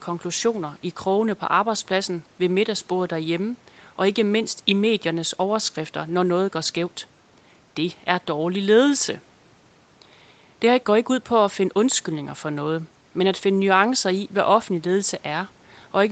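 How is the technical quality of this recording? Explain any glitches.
No glitches; the recording sounds technically sound.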